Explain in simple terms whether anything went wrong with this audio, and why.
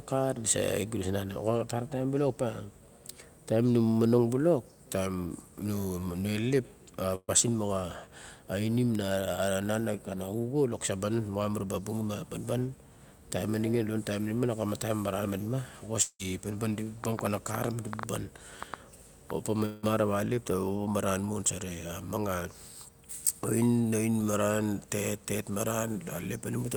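Several faults can be heard in this speech.

At 7.15 s there is a burst of packet loss. A short run of audio data never arrived in time, so the receiver stretched out the last bit of sound it had for about 126 ms, letting it fade, with the final 40 ms going silent. When the speech resumes at 7.30 s, about 120 ms of the original is simply gone, so a small piece is skipped over.

At 16.02 s and again at 19.65 s the sound behaves like a long network dropout, most likely caused by the connection stalling for longer than a single burst. Each time, about 0.17 s of faded, smeared filler replaces real audio, and about 180 ms of speech never comes back. The first ends with a short 60 ms silence before speech returns at 16.21 s. The second runs straight back into speech at 19.85 s with no silent stretch.

From 17.04 s to 19.31 s a train of clicks sits on top of the speech, likely from electrical interference or a faulty connection. 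There are roughly ten sharp ticks, coming at an uneven pace of about five per second. They stand out clearly above the speech and are also audible in the pauses between phrases.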